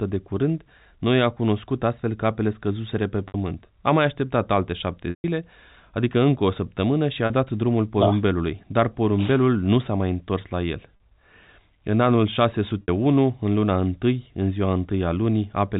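Packet loss with pitch repetition hits at 3.28, 5.10, 7.26, 10.97 and 12.82 s. Gaps of 40 to 140 ms are filled by repeating the last pitch period, giving brief buzzy holds, while the longest gap, at 5.10 s, fades into silence before the speech returns with a short cross-fade.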